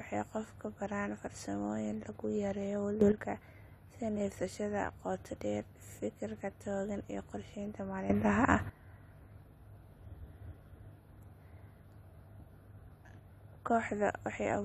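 At 3.01 to 3.12 s and again at 8.10 to 8.70 s, a sudden gain jump lifts speech and background noise together by about 11 dB and about 12 dB, likely from gain applied without a ramp.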